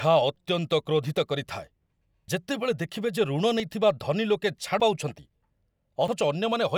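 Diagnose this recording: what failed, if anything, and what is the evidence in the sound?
The speech jumps forward at 0.36, 2.28, 3.6, 4.8 and 6.08 s. No gap of silence appears. The sound simply skips ahead. The losses vary, from a few tens of milliseconds to about a tenth of a second. This points to the driver or buffer stage, likely a dropped buffer (overrun). Samples were overwritten before being read, and the surviving audio was spliced together.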